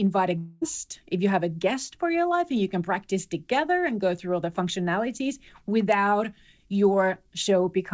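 Speech clip in which the sound from 0.38 to 0.63 s is replaced by a fading, buzzy continuation of the preceding audio, likely a long network dropout concealed by the receiver. Nothing is heard above 8 kHz, which fits a G.722 call codec at 64 kbps.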